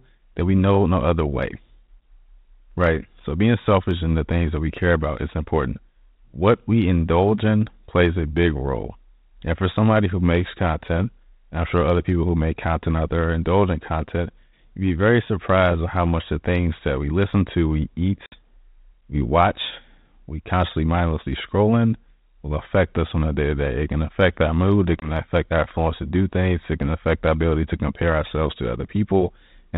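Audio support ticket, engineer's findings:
Packet loss on an ADPCM call. 18.26 to 18.36 s, after "we listen to we": hard-edged silent gap, about 60 ms lost, a few packets. 25.0 to 25.11 s, after "affect our mood it", before "affect our influence to": single-packet hole, about 20 ms. Decoder predictor and step size lose sync with the sender. Speech resumes slightly distorted, settling within tens of milliseconds. Band-limited G.726 path sounds consistent with 32 kbit/s.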